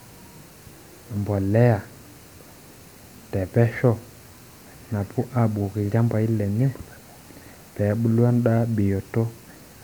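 A speech recording, with nothing technically wrong with it.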